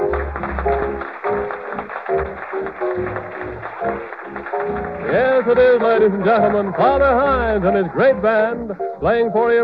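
Channel delay (comb filtering) runs through the whole clip. One channel arrives a fraction of a millisecond late, and summing to mono cancels shared content at evenly spaced frequencies, with the first notch around 3 kHz. The sound is hollow and phasey.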